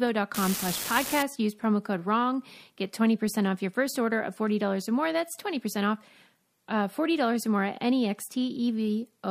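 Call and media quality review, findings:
Unreliable data bit, 0.34 to 1.23 s, speech clip. Steady crackle/fizz, continuing through pauses. Probable component: marginal data line on the converter or digital audio interface, one bit flipping in a random share of samples. Each error a fixed step of about -18 dBFS. Waveform: scattered spikes of identical height riding on the signal. Spectrogram: broadband vertical specks, evenly dense, also visible in gaps.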